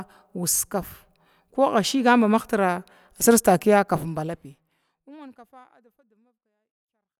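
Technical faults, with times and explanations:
Nothing wrong turns up in this speech, and the gentle fade-out toward the end, starting somewhere around 4 s, is just a smooth editor's fade doing its job.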